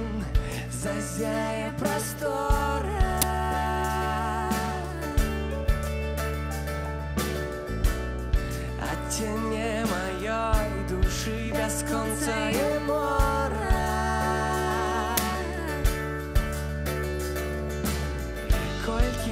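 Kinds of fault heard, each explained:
Uninitialised buffer: stale memory played before audio was written, giving loud cracks or digital noise bursts at 3.22 s and 15.17 s, each 11.6 ms, fitting a 512-sample buffer.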